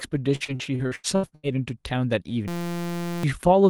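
Repeated packet loss (robotic sound) from 0.35 to 1.46 s: nine gaps, the longest 83 ms, are patched by extending earlier sound, leaving a choppy texture with pieces missing. A system hang loop from 2.48 to 3.23 s repeats a 5.8 ms slice, which fits a 256-sample buffer, as a steady 172 Hz buzz replacing roughly 0.7 s of audio.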